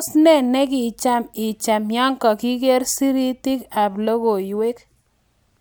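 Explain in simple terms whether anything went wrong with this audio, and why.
Nothing went wrong with this audio; the speech comes through without any faults.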